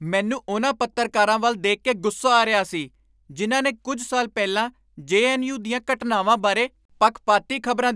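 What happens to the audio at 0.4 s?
Nothing goes wrong at 0.4 s; the speech there plays through intact, with no dropout, click or distortion.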